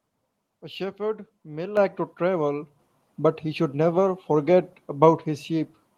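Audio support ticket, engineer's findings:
Microphone volume stepped up at 1.77 s and again at 2.79 s. Speech and background noise jump together, by about 8 dB then about 4 dB. Component: capture gain. Call software judged the input too quiet and raised device volume in discrete steps.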